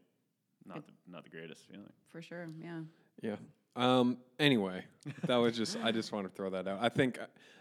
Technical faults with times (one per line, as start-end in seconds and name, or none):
none